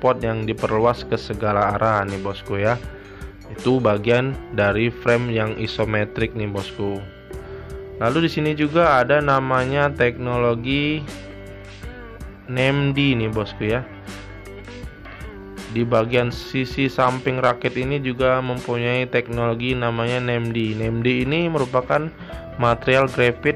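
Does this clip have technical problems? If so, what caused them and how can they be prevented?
Yes. Clock slip clicks run from 0.14 to 23.55 s as an evenly spaced rattle of about twenty single-sample ticks per second, likely from two clocks roughly 500 ppm apart. Random dropouts would be irregular. Locking both devices to one shared master clock prevents it.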